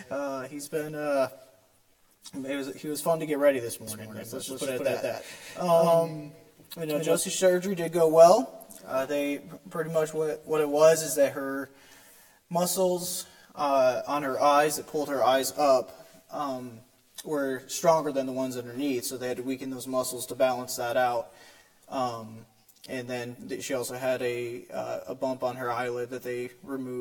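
A doubled audio track runs from 3.87 to 7.15 s: a second, full-band copy of the sound trails the original by roughly a fifth of a second at about the same loudness, with no decay or room colouring, and it cuts in and drops out abruptly at those points. The likely cause is the same signal reaching the mix twice, once directly and once through a slower capture path, so the two copies play out of step.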